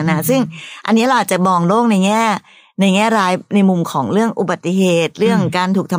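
No technical faults are audible.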